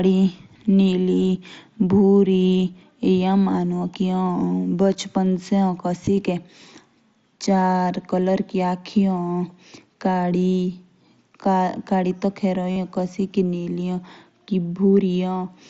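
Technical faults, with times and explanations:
6.06 s and 12.71 to 12.76 s, concealed Bluetooth headset packet loss: voice packets from the headset over the mSBC link never reached the phone, and the receiver filled each gap by repeating the closest-matching slice of the last 20 milliseconds or so of waveform. The 15 ms gap at 6.06 s is nearly invisible. The 52.5 ms gap after "तो खैर एओ" holds as a brief buzzy tone at full level, then warbles as real sound resumes on "एओ कासिकी निली".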